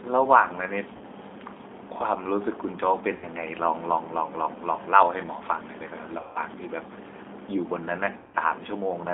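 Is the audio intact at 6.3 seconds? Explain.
No. From about 6.19 to 6.39 s there's VoIP packet loss concealed by the speech codec. Roughly 160 ms of packets went missing, and the decoder kept extrapolating from its last pitch and filter while turning the gain down. So you hear the sound smear into a buzzy tone or coloured noise that fades, and it stays a bit weak and off just after packets return.

It's all riding on the G.729 codec, too, which is plainly audible here. The line only carries about 250 Hz to 3.6 kHz at 8 kbit/s, and the sound is rebuilt from a vocal tract filter plus a few pulses per frame. That gives it the thin, slightly rough, synthetic edge.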